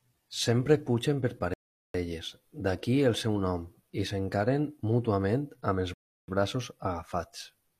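Speech, interrupted twice by a rebuffering stall. The first comes right after "pugen per", from 1.54 to 1.94 s. The second follows "s'encaren mútuament amb els", from 5.94 to 6.28 s. Each time the sound drops to silence and then picks up exactly where it broke off. The player ran out of downloaded audio and waited for more. No speech is lost, but the pauses add about 0.41 s and 0.34 s.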